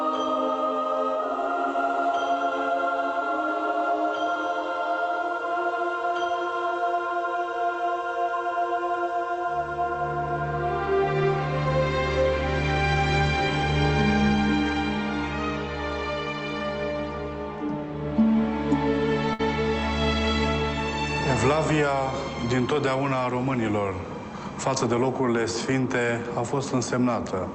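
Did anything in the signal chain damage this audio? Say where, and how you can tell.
Yes, at the network stage: a burst of packet loss at 19.33 to 19.41 s. About 55 ms of concealment holds and fades the last sound, then playback resumes with roughly 60 ms missing.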